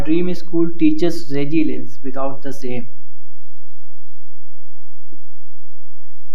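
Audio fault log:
Throughout, DC offset: the whole speech waveform sits shifted off zero by a constant of about -8 dBFS, eating headroom silently. Unlike mains hum or rumble, it has no pitch or movement; its energy sits fixed at 0 Hz rather than at 50 or 60 Hz.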